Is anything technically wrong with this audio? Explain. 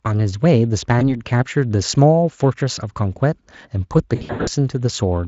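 Yes. VoIP packet loss concealed by the speech codec: packets dropped at 0.99 s (one 20 ms gap) and between 4.15 and 4.50 s (about 260 ms lost, gaps up to 80 ms). The decoder stretches its last pitch into a buzzy tone or coloured noise that fades, and the voice stays weak briefly afterward.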